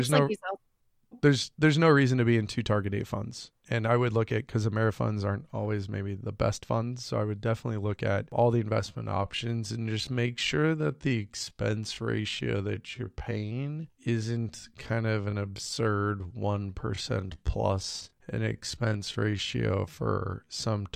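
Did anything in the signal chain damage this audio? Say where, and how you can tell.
Yes, there's a time-stretched section from 8.79 s right through to the end. The speech abruptly slows to about 0.645 times its pace with the pitch unchanged, and it drags. That's likely software stretching, repeating short slices to pad the length.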